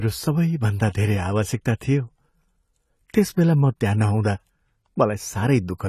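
Throughout the speech, AAC compression damage is plainly audible: nothing remains above 14 kHz and detail is smeared, likely from AAC-LC coding at a low bitrate around 32 kbps, where coarse quantisation of each frame's spectrum strips high-frequency content.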